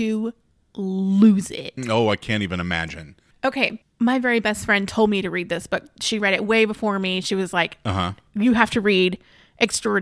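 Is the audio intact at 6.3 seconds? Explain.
Yes, the audio at 6.3 seconds is intact, with no dropout, glitch or other audible fault at that moment.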